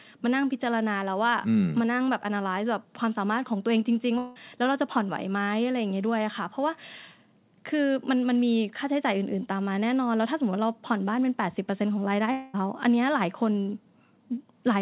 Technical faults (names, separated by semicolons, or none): long network dropout